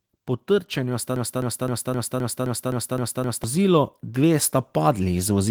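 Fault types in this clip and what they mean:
automatic gain rising: From about 0.48 s to the end, the level climbs steadily rather than jumping, with the speech and the background noise growing louder together. That shared swell is the mark of gain control turning itself up after judging the input too quiet. A speaker moving closer or raising their voice would lift the speech more than the room sound, not both equally.
broken-record loop: Between about 1.16 s and 3.44 s, a fragment of about 260 ms plays back to back, identical each time, nine times over, and whatever speech belonged in that stretch never arrives. This points to a likely stall in the player, encoder or stream, which kept resending the last piece it held. Unlike an echo or reverb tail, the repeats do not decay or blur; each copy is exact and full-level.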